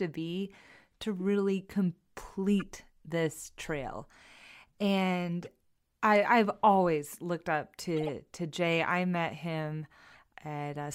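Four bursts of corrupt frames decoded, at 2.60–2.62, 5.43–5.47, 7.97–8.09 and 10.13–10.19 s. Flipped bits misplace energy, giving brief chirps and blips around -30 dBFS (the 8 s burst, spanning several frames, louder; the 10.1 s burst quieter, near -40 dBFS). A spectrogram shows short vertical smears; the waveform shows small spikes.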